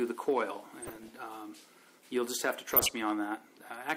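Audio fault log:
0.80–1.16 s and 2.71–3.03 s, DAB burbling: weak reception let bit errors, at around half a percent, slip past error correction into the MP2 data. Corrupted samples put short blips of noise in single sub-bands and corrupted scale factors make sub-bands jump in level for up to a frame, giving blips and level jumps over the sound.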